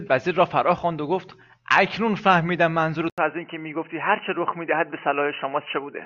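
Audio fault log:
3.10–6.06 s, input switched to a poorer device: after a silent gap of 80 ms, the speech turns dull and boxy through to the end, with nothing above 3 kHz and a faint new background noise sitting well below it, while loudness stays about the same. The cause is likely a change to a narrower-band input mid-recording. A spectrogram shows the upper band vanishing abruptly at the switch after a thin blank column, and the waveform shows a brief flat gap with no jump in amplitude.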